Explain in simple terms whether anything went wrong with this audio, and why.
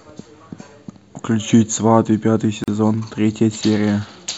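Around 2.64 seconds the speech briefly cuts to silence for about 40 milliseconds, then resumes exactly where it stopped. The edges of the dropout sound blurred rather than perfectly sharp. This is a gap at a join of encoded pieces. The recording was compressed in separate chunks, apparently about 4 seconds long, and then stitched back together. Each chunk carried a little built-in silence at its edges, and nobody trimmed it away before joining, so that silence remains in the middle of the speech.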